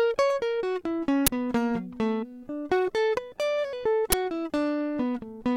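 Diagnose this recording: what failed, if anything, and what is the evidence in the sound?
The playback buffer stage failed: an uninitialised buffer reached the output twice in this music, at 1.27 s and 4.12 s. Each is a harsh burst of loud digital noise lasting about 12 ms, which fits a 512-sample block filled with leftover memory rather than audio.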